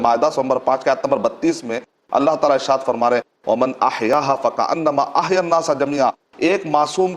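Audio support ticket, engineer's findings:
Tiny skip at 4.13 s, overlap between stream segments. Segment boundary near 4 s. Timestamps overlap, player trims a few ms of real sound, waveform jumps. Segmenter timing worth a look.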